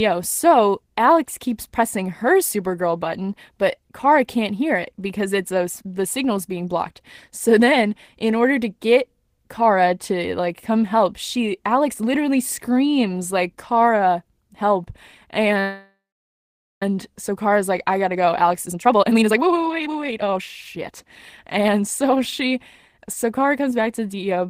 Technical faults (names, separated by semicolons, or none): call audio freeze; jitter buffer speed-up